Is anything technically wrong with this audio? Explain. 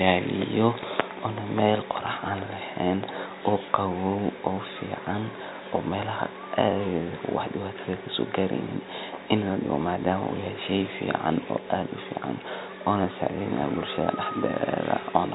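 No, nothing is technically wrong: this is speech carried over G.711 telephone coding, and its narrow telephone bandwidth and faint level-following hiss are simply how that format sounds.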